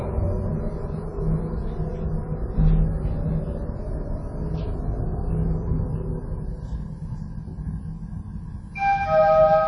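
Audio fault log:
Throughout, WMA compression: ringing, washy smearing with hiss that breathes with the sound and nothing above 10.1 kHz, likely from a low bitrate near 32 kbps. Unlike plain filtering, it smears.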